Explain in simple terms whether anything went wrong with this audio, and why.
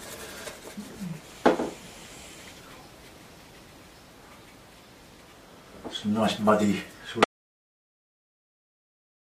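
Audio dropout to silence from 7.24 s to the end: the sound stops dead into total silence, likely because the input was lost while recording carried on.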